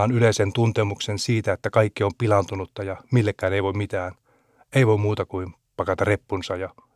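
Nothing stood out on listening to this speech recording.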